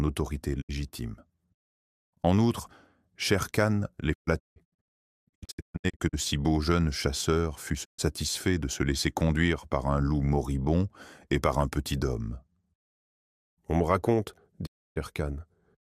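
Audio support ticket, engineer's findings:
Digital broadcast dropout, four events. Sound fades out over roughly 20 ms and returns later, with the intervening audio missing. Holes at 0.60–0.71 s, 7.84–8.00 s and 14.65–14.98 s. Worst stretch 4.12–6.15 s: scattered short holes over about 2 s, longest 160 ms, about 1.2 s lost in total. Probable component: receiver/demodulator. Mechanism: signal loss or failed-checksum frames muted until clean frames resume. Gap lengths are consistent with 32 ms frames.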